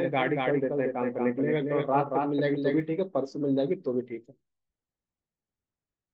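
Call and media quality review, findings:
Dry repeat of speech about a fifth of a second late, somewhat quieter, 0–2.8 s, abrupt stop. Doubled audio track, likely slower second capture path.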